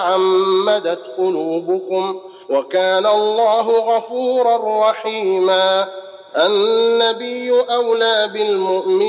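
No technical faults can be heard anywhere in the clip. Nothing breaks up, drops out or shifts in level or timing at any point.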